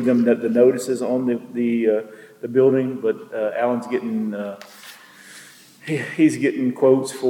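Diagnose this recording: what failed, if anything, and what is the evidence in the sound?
Nothing in the signal points to a failure at any stage of the chain, from capture and conversion through storage to playback.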